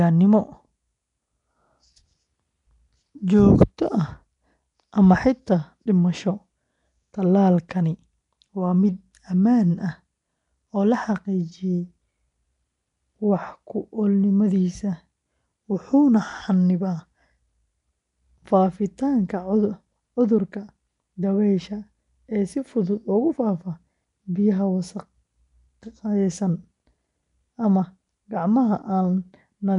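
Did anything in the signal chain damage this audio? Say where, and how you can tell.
Yes, at the codec stage, and the damage runs through the whole clip. The likely cause is Nellymoser compression, the old Flash microphone codec, at a rate that fits about 44 kbps. It codes short fixed blocks with very few bits per sample and fills bands it cannot afford with noise, so the speech carries a rough, hissy halo and a smeared, underwater quality. Nothing survives above 10.6 kHz.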